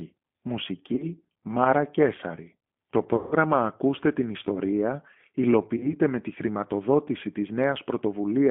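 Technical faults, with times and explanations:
Throughout, G.729 codec: the speech sounds slightly rough and synthetic, with plainly audible coding damage and a telephone band of about 150 Hz to 3.4 kHz. At 8 kbit/s, each 10 ms frame is rebuilt from a vocal tract filter, a pitch predictor and a few pulses, so nothing above 4 kHz survives.
0.96–1.10 s, VoIP packet loss concealed by the speech codec: a short stretched, fading sound where about 30 ms of audio went missing. The decoder filled the gap by repeating its last pitch and filter at falling gain, and the sound stays weak for a while after it resumes.
3.16–3.35 s, VoIP packet loss concealed by the speech codec: a longer stretched sound that fades, covering about 150 ms of lost audio, which fits several consecutive packets. The extrapolation decays frame by frame, and recovery lags because each frame depends on the one before.
5.77–5.96 s, VoIP packet loss concealed by the speech codec: a brief stretched, fading patch just before "με τη χρηματοδότηση", from about 30 ms of lost audio. 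The decoder extended the previous pitch and filter to cover the gap, and the onset that follows sounds thin while its state recovers.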